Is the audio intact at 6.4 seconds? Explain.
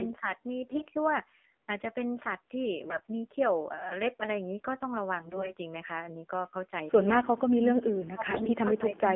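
No. The AMR narrowband mobile codec affects the whole clip, including 6.4 s. Speech is squeezed into 250 Hz to 3.4 kHz and rebuilt from a coarse vocal-tract model. It sounds plainly buzzy and synthetic, which fits a low rate near 7.4 kbps.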